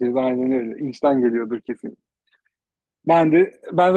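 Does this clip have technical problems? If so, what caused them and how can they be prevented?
Yes. From 0.53 to 0.59 s and again from 3.13 to 3.19 s the speech turns briefly rougher and noisier, with no gap. This is lost packet rebuilt from error correction: about 40 ms of audio each time, likely from two dropped packets, was replayed from a low-bitrate Opus copy. Preventing it means reducing packet loss on the network, for example with a steadier connection or higher priority for call traffic.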